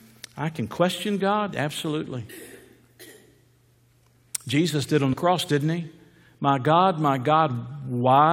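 At 5.12 to 5.14 s the speech jumps forward. Compressed frames were skipped. Whole frames never reached playback, either missing or rejected by the decoder as damaged. Roughly 50 ms of audio is lost. The same fault returns at 7.44 to 7.50 s. Here about 20 ms drops out.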